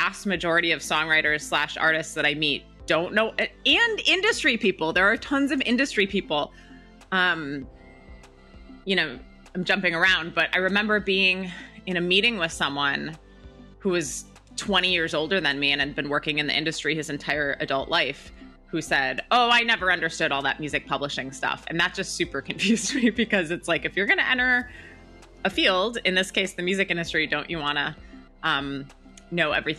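Nothing stood out as a technical fault anywhere on listening through the recording.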